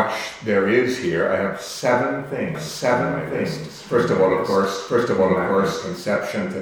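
From about 2.55 s to 5.97 s there's a doubled audio track: a second copy of the sound trails roughly a second behind, about as loud as the original, and cuts in and out abruptly. Most likely a slower capture path is recording it twice.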